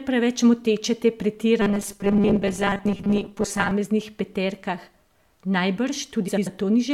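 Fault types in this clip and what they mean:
Robotic sound from repeated short buffers: From 1.62 to 3.71 s, just after "preveč moteče te", the speech becomes a rigid metallic buzz near 200 Hz while loosely tracking the words. The likely cause is a 5 ms slice looping to cover late audio, with roughly half the sound repeated.
Frames out of order: Between 6.28 and 6.48 s the speech flutters and garbles. Two neighbouring blocks of about 93 ms each, which fits runs of four frames, play swapped, so nothing is lost but the order is wrong.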